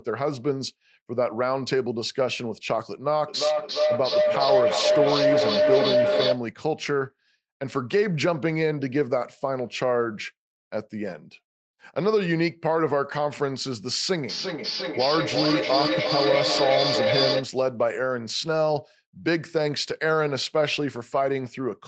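From 3.28 to 6.49 s a feedback howl builds near 700 Hz. The shared call loops and gains level each trip. Its loop delay is roughly 0.4 s, and it peaks about 3 dB over the speech.

From 14.29 to 17.55 s comes feedback echo between two devices. One device replays the other's microphone. The speech returns about 0.4 s later, thin and ringing, at roughly speech level.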